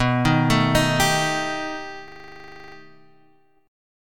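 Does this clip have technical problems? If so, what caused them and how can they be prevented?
Yes. A system hang loop from 2.08 to 2.76 s: the host stalled while the audio hardware kept replaying one 40 ms buffer, giving a 25 Hz buzzing stutter for 17 repeats. Prevent it by keeping the audio thread at real-time priority and clear of blocking drivers, with a watchdog that mutes output on a stall.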